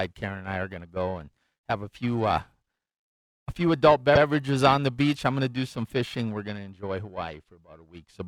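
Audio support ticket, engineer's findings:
Periodic clock jitter, whole clip. Rough, metallic edge on the speech, gone in the pauses. Converter clock likely being wobbled by interference at around 1 kHz, throwing sidebands either side of every component, worst up top.

Repeated frames, 4.14 to 4.22 s. Quick stutter, same 78.4 ms played twice. Fits a short run of compressed frames getting written or sent again, so the decoder replays it. Clip ends up 78.4 ms longer.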